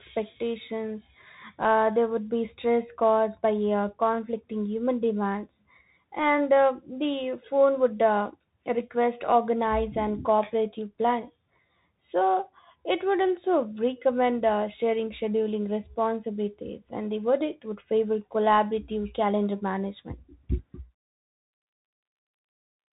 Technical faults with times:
0.00-22.93 Bluetooth CVSD headset codec

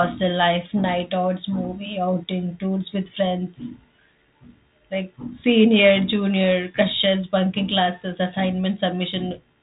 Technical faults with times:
none

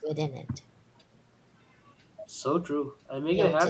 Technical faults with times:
none

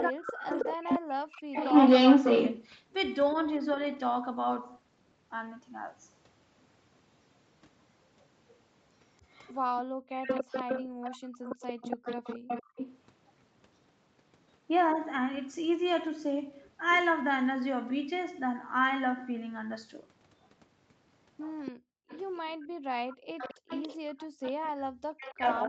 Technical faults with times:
0.00-3.35 echo leak
0.03-3.78 speech suppressed in double talk
8.20-12.99 echo leak
9.83-12.76 background gated by the echo canceller
20.42-25.33 echo leak
21.72-24.41 background gated by the echo canceller
24.69-25.68 speech suppressed in double talk

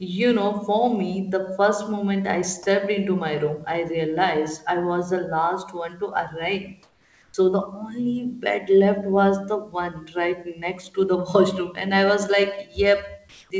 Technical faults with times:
6.83-7.34 comfort noise in place of the background
7.32 onset clipped by the voice detector
13.29-13.50 comfort noise in place of the background

